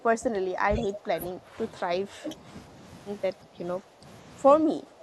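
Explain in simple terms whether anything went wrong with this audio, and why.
Yes. The speech keeps sinking in level, a clear case of speech suppressed in double talk. It happens from 0.0 to 1.58 s, 1.81 to 2.46 s, 3.33 to 3.62 s, 3.8 to 4.04 s and 4.63 to 5.02 s. The voice turns quieter each time. The likely cause is an echo canceller that mistook the talker for echo while both sides spoke.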